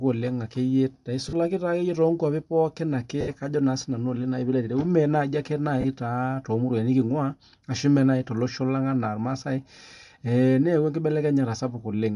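Throughout the clip, the speech has a grainy, breathy edge, and its upper spectrum sounds thin and noise-filled. This is likely Bluetooth LC3 compression. Treble detail is being replaced with noise, which fits a 48 kbps stream in 10 ms frames.

Lost LE Audio frames occur three times: from 1.29 to 1.33 s, from 3.21 to 3.29 s, and from 5.81 to 5.85 s. Each gap lasts about 40, 70 and 30 ms. The decoder repeats the last spectrum with scrambled phase, so the speech briefly turns into a noisy smear.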